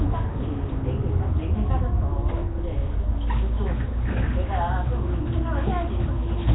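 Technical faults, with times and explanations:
Throughout, Nellymoser compression: nothing above 3.9 kHz, a rough hissy halo and smeared, underwater texture, likely from heavy low-bitrate Asao coding filling starved bands with noise.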